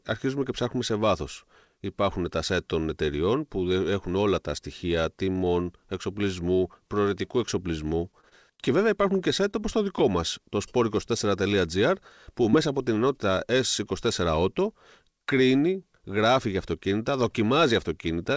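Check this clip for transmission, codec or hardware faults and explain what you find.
Three network faults show up in this speech clip. All are brief. The audio has nothing above 8 kHz, as expected from a wideband call codec.

Repeated packet loss (robotic sound) runs from 8.12 to 8.68 s, after "τιμών εξοπλισμού προαιρετικού εξοπλισμού" and before "βέβαια υπάρχουν και site". Audio keeps failing to arrive in time. Five short holes, the longest 37 ms, are patched by extending the previous sound. About 60 ms is lost. The stretch sounds choppy.

A short stall from a late packet occurs at 9.51 to 9.55 s, just before "όπως το". One packet arrived late and the buffer ran dry. The last sound was held for 20 ms until it came, and nothing was skipped. It sounds like a sound held too long, with a slight buzz or dip.

A short concealed packet loss sits at 12.51 to 12.55 s, just before "από την ενότητα". 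About 20 ms of audio never arrived. The receiver filled the hole by continuing the previous sound and then blended back. It sounds like a quick smear or wobble.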